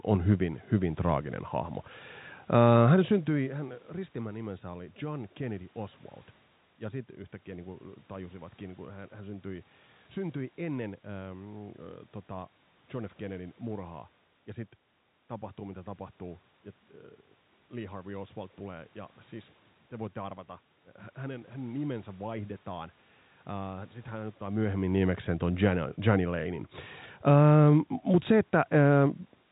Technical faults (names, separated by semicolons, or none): none